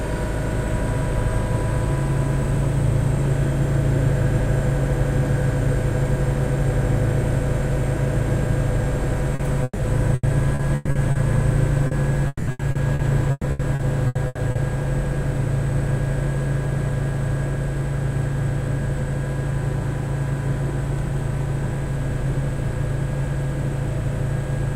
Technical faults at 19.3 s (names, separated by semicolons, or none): none